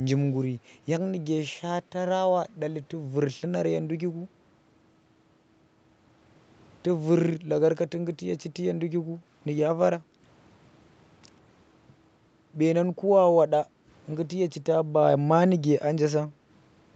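At 10.01 and 13.65 s the room background dips by about 8 and 9 dB for roughly a fifth of a second: background gated by the echo canceller while the far end played. Unlike a dropout, the sound never vanishes fully.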